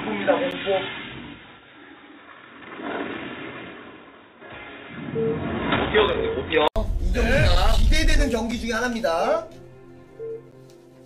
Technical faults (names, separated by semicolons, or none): input switched to a poorer device; gap between stream segments